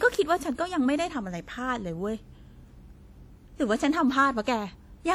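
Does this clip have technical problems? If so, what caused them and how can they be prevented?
Yes. A long-block transform encoder, likely WMA compression at a rate that fits about 48 kbps, spread its quantisation noise across tens of milliseconds. Throughout the speech this gives a ringing, washy quality and a hiss that swells and fades with the signal, even though content still reaches 20.1 kHz. Encoding at a higher bitrate or with a more modern codec would prevent it.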